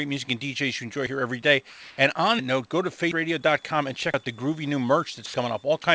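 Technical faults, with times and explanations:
1.70–1.98 s, 5.26–5.34 s and 5.82–5.84 s, sound dropped by the voice detector: right after "every day" the speech gives way to steady, featureless hiss for 280 ms, then again for 80 ms and for 20 ms near the end. The sender likely judged quiet speech to be background and stopped transmitting, so the receiver filled in comfort noise. On a spectrogram, harmonic speech bands are cut off and replaced by a flat, even noise wash, and the waveform flattens to low-level noise.
3.41–5.64 s, switching supply whistle: a faint high whistle, about 35 dB below the speech, wanders between 3.4 and 3.55 kHz as a power supply's switching frequency shifts with load. A spectrogram shows it as a thin horizontal line that drifts slightly in pitch, sitting well below the 8 kHz ceiling of the call path. It is too quiet to change the waveform visibly.
4.14 s, dropped buffer (overrun): an abrupt jump in the sound, where about 100 ms of audio is gone and the two ends are joined with no gap. 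The likely cause is the capture software failing to collect its samples before the hardware overwrote them. On the waveform, the signal changes abruptly at the join, and the spectrogram shows the speech pattern skipping forward.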